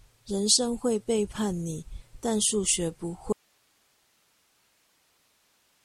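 At 3.33 s, just after "但數學不", the speech cuts off abruptly and only hiss about 40 dB down remains to the end. This audio dropout to a faint residue is likely a lost source on a still-live path. The waveform collapses to a thin band, and the spectrogram's harmonics stop at a sharp vertical edge.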